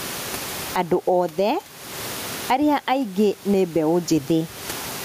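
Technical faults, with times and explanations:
Throughout, gain pumping: gain was likely set far too high, so a fast limiter clamps down on each loud syllable and lets go in pauses. The room noise sits about 31 dB below the speech, the gain swings by around 20 dB, leaving speech squashed.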